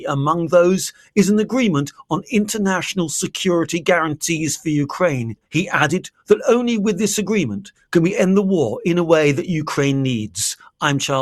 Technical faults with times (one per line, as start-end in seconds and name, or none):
0.92-1.17 sound cut by the noise suppressor